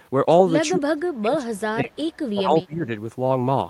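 A speech clip in which the talker sinks sharply in level from 0.72 to 2.02 s, falling by around 30 dB at its deepest, then dips again from 2.34 to 2.88 s by around 20 dB. This is speech suppressed in double talk, likely caused by an echo canceller that met simultaneous talk from the far end, could not tell this voice from loudspeaker echo, and attenuated both together.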